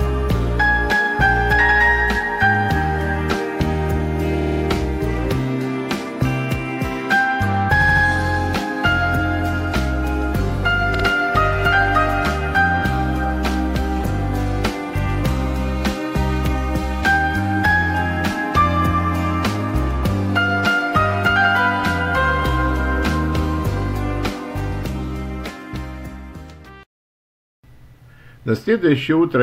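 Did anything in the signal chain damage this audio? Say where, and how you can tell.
Yes, at the codec or storage stage: repeated frames. A short block of compressed audio plays again and again at 4.40–4.61 s (a 52 ms block heard four extra times), 7.80–8.03 s (a 78 ms block, three extra times) and 10.93–11.04 s (52 ms, twice more). Each event is a stutter. The block lengths fit runs of two or three 26 ms frames written more than once, so each event lengthens the audio by the repeated time.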